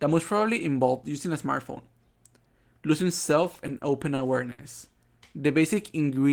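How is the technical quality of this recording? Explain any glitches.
The technical quality is impaired by two timing glitches in the later part of the clip.

From 3.43 s to 4.60 s there are repeated stalls, a stutter. Packets arrived late, so the jitter buffer ran dry six times. Each time the receiver stretched the last sound to fill the gap, about 150 ms in total and 60 ms at most, which is 13% of that stretch. No audio is lost, but the speech drags and hiccups. On a spectrogram these appear as short smeared, frozen bands. In the waveform they look like repeated or decaying segments.

From 5.41 s to the end there is a jitter buffer slow-down. The buffer was running low or had just raised its target delay, so the receiver repeated single pitch periods and short bits of pauses to rebuild its reserve, adding 91 ms. Playback runs at about 91% speed with the pitch unchanged, so sounds feel drawn out. 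A spectrogram shows stretched harmonics with no shift in frequency. The waveform shows near-identical cycles repeated back to back.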